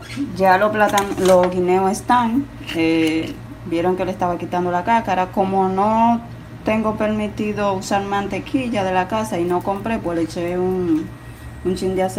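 No technical faults can be heard anywhere in the audio.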